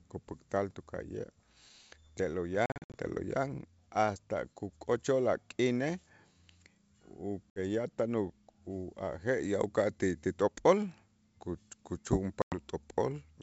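Speech carried over a wideband ADPCM link, where packet loss hits three times: 2.66 to 2.96 s (about ten packets, 200 ms of audio missing in holes spread over 280 ms, longest 60 ms), 7.50 to 7.60 s (a few packets, 60 ms), and 12.42 to 12.55 s (around five packets, 100 ms). Each loss leaves an abrupt silent gap. Because the decoder's predictor and step size drift from the sender's, the speech resumes slightly distorted before settling over tens of milliseconds. The G.722 coding itself sounds clear, with only faint upper-band hiss.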